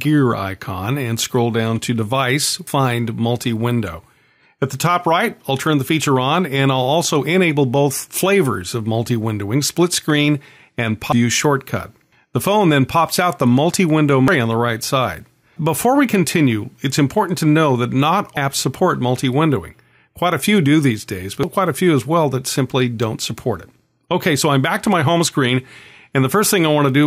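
At 2.67, 11.12, 14.28, 18.37 and 21.43 s, damaged data in the compressed stream breaks decoding. The decoder loses frame sync and resynchronises, leaving a brief glitch each time.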